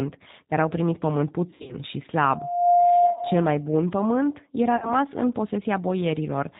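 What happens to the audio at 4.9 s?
Right after "pământ era", VoIP packet loss concealed by the speech codec runs from 4.77 to 4.94 s. About 50 ms of audio is lost, which fits five 10 ms frames. The decoder keeps extending the last pitch and filter at falling gain, so the sound turns into a fading buzzy tone or coloured noise rather than a silent gap. Damage outlasts the loss because each frame builds on the previous one. This sits on top of the G.729 codec heard throughout. Its plainly audible roughness and missing content above 4 kHz are steady across the clip, unlike this brief local smear.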